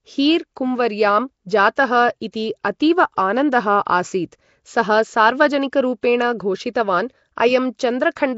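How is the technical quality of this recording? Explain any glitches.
The recording is plainly degraded by coding damage throughout, with two short glitches.

Throughout, the audio was likely squeezed through Nellymoser compression. Its fixed low bit budget starves weak bands, which get filled with synthetic noise, and nothing survives above 7.7 kHz. The result is a rough, hissy halo and a smeared, underwater quality consistent with a rate around 32 kbps.

At 1.76 s and again at 2.32 s, just before "अतीव आनन्दः", there is pre-echo. The codec spread the noise meant for a sharp onset across its whole block, so a short hiss runs about 15 to 17 ms ahead of each attack and softens it.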